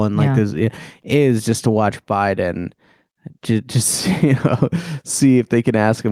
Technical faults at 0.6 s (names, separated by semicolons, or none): gain pumping